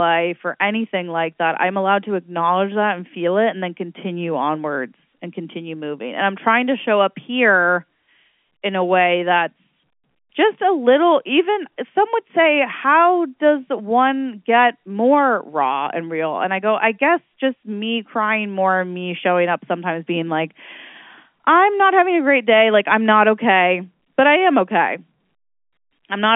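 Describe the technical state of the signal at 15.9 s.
At 15.9 s the signal is intact, with the speech carried cleanly through its G.711 telephone coding, band-limited to the usual line range with nothing above about 3.7 kHz.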